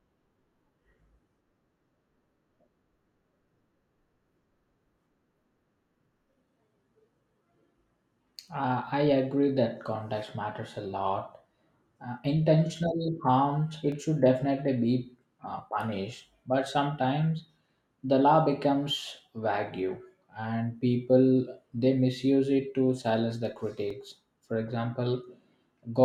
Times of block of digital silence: 13.92, 23.90

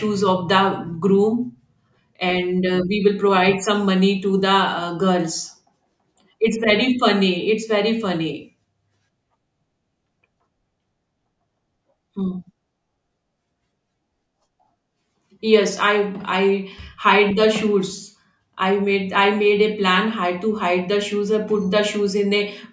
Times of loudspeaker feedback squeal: none

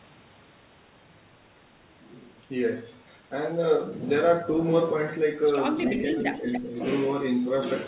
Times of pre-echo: none

